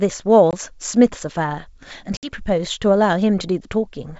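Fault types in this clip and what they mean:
Packet loss on an ADPCM call: The speech breaks into abrupt, hard-edged silences, about 20 ms near 0.51 s and about 60 ms around 2.17 to 2.34 s. Each gap is followed by a brief stretch of slight distortion before the sound settles. Lost packets, roughly a couple and then several, were replaced with silence, and the decoder's adaptive predictor and step size drifted from the sender's until they caught up over tens of milliseconds.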